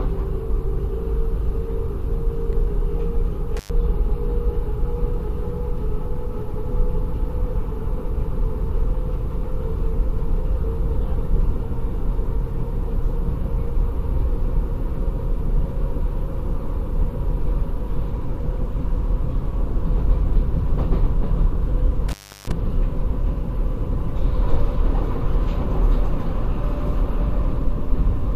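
A sound recording with an intermittent contact fault: brief dropouts at 3.57 s (about 0.1 s open) and 22.09 s (about 0.34 s), crackle-edged gaps showing as near-empty waveform stretches and faint broadband hiss columns on a spectrogram.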